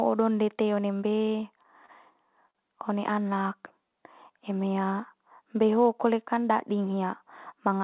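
At 1.86 to 1.90 s and again at 2.50 to 2.57 s there's a short stall from a late packet. The jitter buffer ran dry, so the receiver stretched the last bit of sound, by 25 ms and then 43 ms, until the packet arrived. Nothing is lost, but each sound hangs slightly too long.

From 6.34 to 6.69 s the jitter buffer speed-up kicks in. The buffer had built up extra delay, so the receiver cut out short pitch-period chunks, around 40 ms in total. The speech runs at about 109% speed with unchanged pitch and sounds a touch rushed. The call audio is band-limited throughout, with nothing above 4 kHz.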